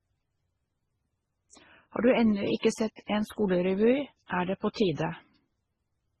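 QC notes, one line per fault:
Throughout, transcoding between lossy codecs: nothing is heard above 12.1 kHz, and the speech carries both smeared, swirly MP3-style artefacts and Opus's own coding noise. This likely comes from a very low-rate MP3 pass re-encoded to Opus near 24 kbit/s, which spends bits preserving earlier damage.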